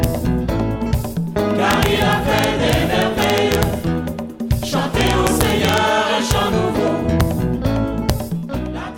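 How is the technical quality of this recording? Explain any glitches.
Integer overflow damages the recording in six places: at 0.04 s, from 1.71 to 3.63 s, from 5.01 to 5.78 s, and at 6.31, 7.21 and 8.10 s. Peaks pushed only about 0 to 1 dB past full scale, but instead of being limited the samples wrapped to the opposite extreme. Each overshoot becomes a full-range jump, heard as harsh, violent cracks on the loudest moments, much sharper than clipping.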